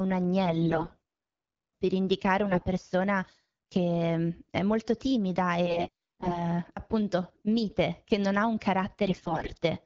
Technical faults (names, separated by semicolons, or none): AMR bit errors